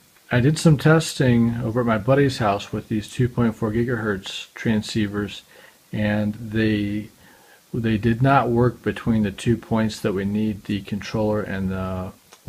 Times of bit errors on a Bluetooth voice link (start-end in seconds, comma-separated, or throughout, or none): none